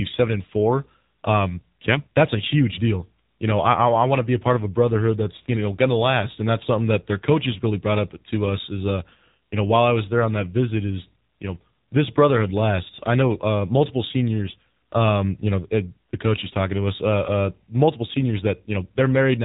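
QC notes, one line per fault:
Throughout: AMR narrowband mobile codec. Nothing above 3.8 kHz remains. The speech is plainly buzzy and synthetic, which fits a low mode near 7.4 kbps.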